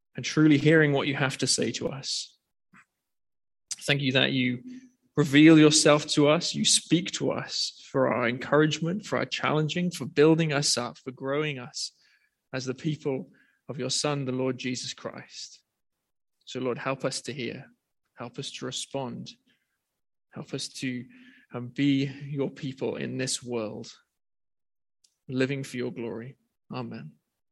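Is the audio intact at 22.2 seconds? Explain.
Yes, at 22.2 seconds the audio is intact, with no dropout, click, distortion or other fault at that point.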